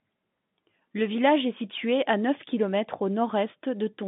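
Speech on a G.711 telephone coding path, band-limited to 150 Hz to 3.6 kHz with nothing above 3.8 kHz, and no faults found.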